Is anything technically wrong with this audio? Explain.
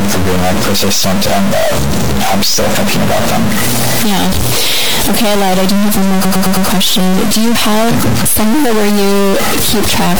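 Yes, there are two faults. A stuck bit runs through the whole speech clip. The sound is corrupted all the way through, and the pauses between phrases are filled with noise rather than falling quiet. The likely cause is one data bit held permanently at 0 or 1 by a broken line or converter. Whenever the waveform crosses that bit, about half the sample values shift by its weight, and the sign flips of small values keep feeding noise into the gaps. On a spectrogram this shows as a broadband floor that never clears during pauses. The waveform has a constant, jagged offset texture.

Repeated frames occur from 6.24 to 6.66 s, right after "do have one more". A 106.7 ms block, which suggests a five-frame run, was played four extra times. The same fragment repeats back to back as a stutter, and the clip is 426.7 ms longer as a result. On the waveform and spectrogram, identical short patterns sit side by side like copied tiles.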